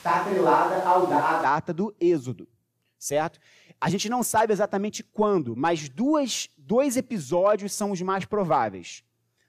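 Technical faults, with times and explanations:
0.00–1.43 s, switch to a distant microphone: The clip opens already in this state. The speech sounds roomy and hollow, with thin bass, and then snaps back to a close, full sound at 1.43 s. The likely cause is that the close microphone's signal was missing, so a microphone further away was used. Its greater distance picks up more room reflection and less low end. The level stays about the same, but room noise sits only about 25 dB below the speech.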